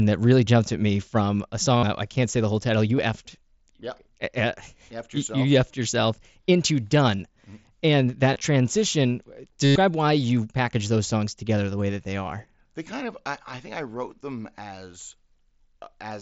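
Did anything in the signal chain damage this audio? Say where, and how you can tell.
Yes. The Bluetooth link shows concealed headset packet loss at 1.77–1.83, 2.97, 8.34–8.41, 9.65–9.76 and 12.57 s. Repeated waveform patched the gaps. The 105 ms run buzzes.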